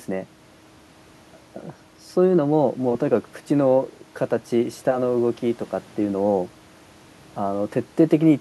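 A speech recording, and nothing is technically wrong with it.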